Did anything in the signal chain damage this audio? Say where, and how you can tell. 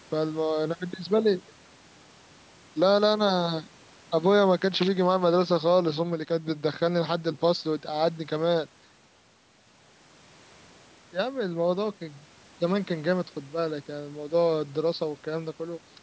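No, the speech shows only the normal marks of call microphone processing: the lowest bass is trimmed by its high-pass filter and nothing sits above 8 kHz, with no stage of the chain leaving any damage.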